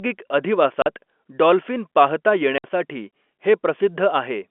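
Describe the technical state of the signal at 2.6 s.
At 2.6 s, packets go missing and the receiver substitutes silence. This packet loss filled with silence runs from 2.58 to 2.64 s. The 60 ms hole, which fits three 20 ms packets, cuts the speech off abruptly, with hard edges.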